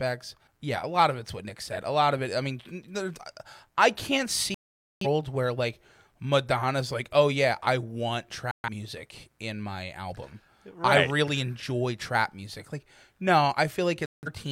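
At 4.54 s, after "I can't", the speech mutes until 5.06 s, resuming at "where like"; again from 8.51 to 8.68 s between "oh yeah I want" and "music in my album", and 14.06 to 14.29 s. This is digital broadcast dropout: the receiver lost valid frames and muted, so the audio goes silent rather than smeared or repeated, and the sent material is gone.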